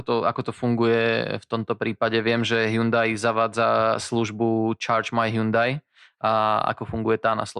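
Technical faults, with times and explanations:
Nothing technical stands out here; the speech comes across steady and intact the whole way.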